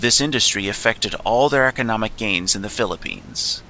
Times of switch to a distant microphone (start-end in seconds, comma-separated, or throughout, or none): none